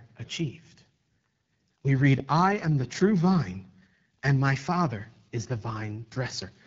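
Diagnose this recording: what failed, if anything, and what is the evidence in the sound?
The failure is at the codec stage: AMR wideband (HD Voice) coding damages the speech throughout, leaving it plainly rough and raspy, which points to one of its lowest modes, around 8.85 kbit/s. A spectrogram would show harmonics ending near 6.4 kHz, then structureless noise up to 7 kHz.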